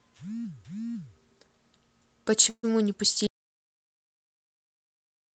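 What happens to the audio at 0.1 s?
Nothing goes wrong at 0.1 s; the speech passes through the call path intact at that moment.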